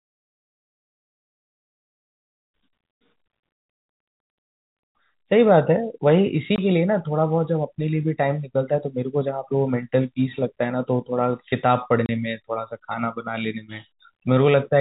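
At 6.56 to 6.58 s and again at 12.06 to 12.09 s, packets went missing in transit and the receiver substituted silence rather than concealing the gap. The first hole lasts 20 ms and the second 30 ms, which fits a 10 ms packet size. The speech drops abruptly to nothing, with hard edges on either side of each gap. This packet loss filled with silence sits on top of the band-limited G.711 telephone coding.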